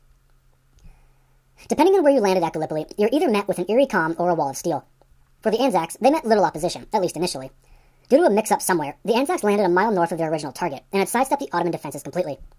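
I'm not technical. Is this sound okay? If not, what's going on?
No. From start to finish the speech sounds rushed and squeaky, about 1.45 times faster than normal and roughly six and a half semitones higher, like a chipmunk version of the speaker. This is a wrong sample rate fault. The recording is being played back faster than it was captured, with nothing to correct for it, so speed and pitch rise together. The amount fits audio recorded at 22 kHz but played at 32 kHz.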